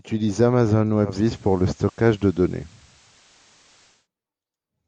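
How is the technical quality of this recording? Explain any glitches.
The recording has one noticeable glitch. From 1.02 s to 4.08 s, faint hiss rises and level shifts about 2 dB. This is digital radio blending to analogue: the receiver lost digital reception and cross-faded over 234 ms to the station's FM broadcast, then back.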